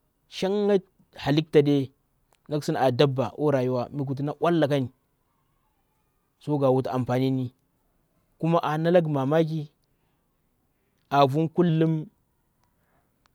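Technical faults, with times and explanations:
11.69–13.34 s, wrong sample rate: after "a vu", samples are clocked out slower than they were captured, with no conversion, which fits 48 kHz material played at 44.1 kHz. Speed drops to 0.919 and pitch falls 1.47 semitones together, so speech turns slightly lower and slower.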